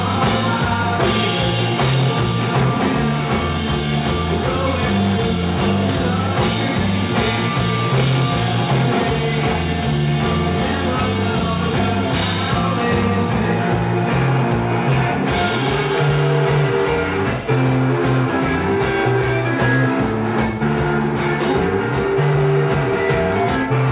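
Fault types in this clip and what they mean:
No faults can be heard anywhere in the clip. There is nothing to list under any fault type.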